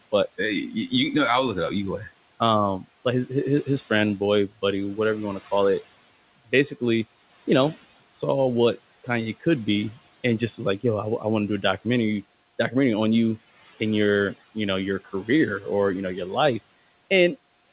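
Speech over a narrowband call link with nothing above 4 kHz, consistent with a G.711 line, with room noise sitting about 19 dB below the voice. Noise suppressor artifacts run throughout: the background is pulled down by about 16 dB between phrases and returns under the voice, unlike a gate's hard on/off switching. From 0.68 to 0.93 s, the speech is cut by the noise suppressor: about 150 ms of it sinks by up to about 13 dB and sounds swallowed, unlike a dropout or packet loss.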